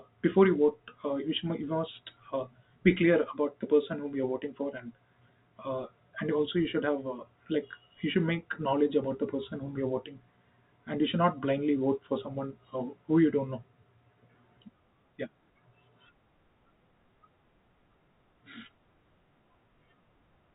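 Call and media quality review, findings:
Nothing to flag on this speech call, just the usual G.711 telephone sound with the band topping out around 4 kHz and a faint hiss riding along with the level, as that path is meant to behave.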